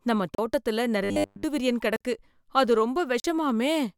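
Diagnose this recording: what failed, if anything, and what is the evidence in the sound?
Block of digital silence at 0.35 s (34 ms), 1.96 s and 3.20 s (43 ms each, fitting a 2048-sample buffer): the driver or buffer stage left output unfilled, so speech drops out.

Robotic sound from repeated short buffers, 1.04 to 1.43 s, right after "நம்ம தோட்டத்தில": a 100 Hz metallic buzz replaces the speech, likely from a starved buffer looping 10 ms chunks.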